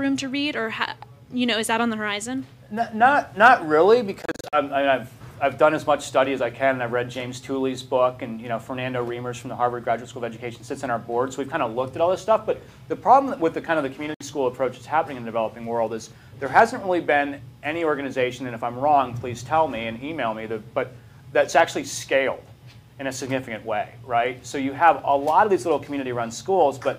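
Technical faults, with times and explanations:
4.22–4.57 s: Bluetooth dropout. The sound stutters through several gaps spread over about 0.3 s, totalling roughly 0.18 s, the longest about 46 ms. The likely cause is packets arriving too late and being dropped, with playback resuming as though it had run on.
14.14–14.21 s: Bluetooth dropout. Silence of about 61 ms, then the sound returns further along. The likely cause is a brief run of late packets discarded before reaching the headphones.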